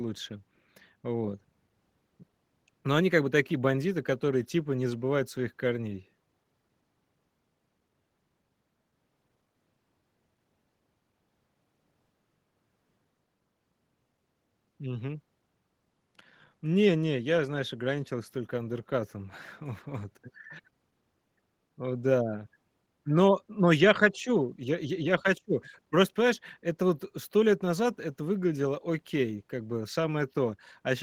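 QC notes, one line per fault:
Nothing to flag here, as no technical faults turn up anywhere in the speech.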